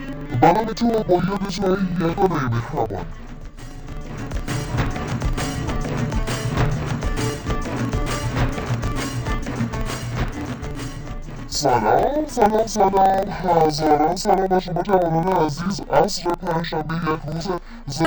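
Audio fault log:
throughout, interleaved audio read as planar: the sound plays an octave low, doubled and choppy, with a flutter at about 23.4 Hz while the overall pace holds steady. Each block of roughly 42.67 ms, which fits a 2048-sample block, carries alternating left and right samples, but the first half is taken as left and the second as right. Both channels then step through at half speed, and every block boundary breaks the sound up.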